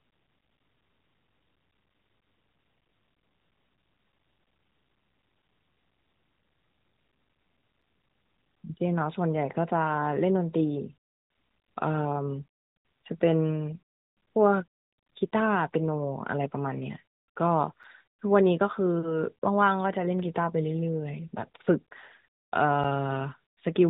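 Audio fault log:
2.81, 7.82, 17.83 and 22.84 s: gap between chunks. Each is a tiny dropout of about 7 ms, where the speech was handled in 5 s pieces and a sliver of silence got left at each join. Nothing's missing, just briefly interrupted.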